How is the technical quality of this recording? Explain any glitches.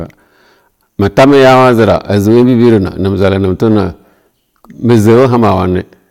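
The recording has one technical fault, and it runs through the whole clip. That fault is hard clipping. The speech was driven roughly 12 dB beyond what the signal path could pass. Every peak that tried to go higher was cut flat at the ceiling. A small share of the samples, around one in twenty, hit that limit. The flattened tops add harmonics high up the spectrum. As a result, each loud syllable carries a harsh, gritty fuzz.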